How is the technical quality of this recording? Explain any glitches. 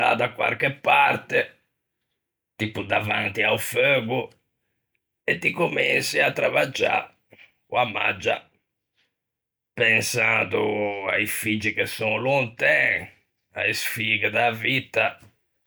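No glitches or technical faults can be heard anywhere in this speech recording, so there is nothing to explain.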